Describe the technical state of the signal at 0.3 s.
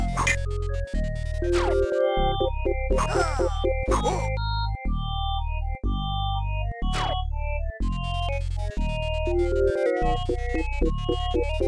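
At 0.3 s the signal is intact, with no dropout, distortion, glitch or other technical fault audible at that point.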